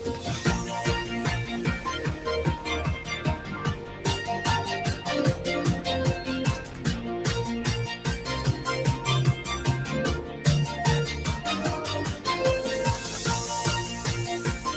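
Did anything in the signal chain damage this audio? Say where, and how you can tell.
Yes. The damage happens in the call processing stage, where a noise suppressor built for speech was applied to music or other sounds. Throughout the clip, held material and decaying tails are pulled down while onsets pass, giving a pumping level swing of roughly 5 dB. On a waveform, the envelope dips after each attack. A spectrogram shows sustained partials thinning and fading early. The band-limit near 8 kHz comes from the Opus call path, which fits a low bitrate around 20 kbps, and is not part of this fault.

At two points the suppressor cuts sound it has mistaken for noise. From 3.79 to 4.02 s the level sinks by about 5 dB, and from 10.27 to 10.45 s by about 7 dB, each lasting roughly 0.2 s. There the suppressor turns the sound down more than the rest. On the waveform they appear as brief notches in the envelope. 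On the spectrogram they show as short vertical bands where energy across the spectrum drops before recovering.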